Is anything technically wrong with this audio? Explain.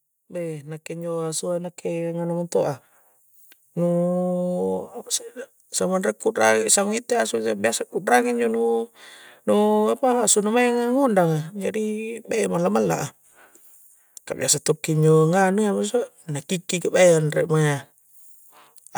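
Yes. From 0.14 to 7.6 s, automatic gain rising lifts the level by about 13 dB as the control chases quiet input. The speech and background noise swell together, which sets it apart from a talker simply getting louder.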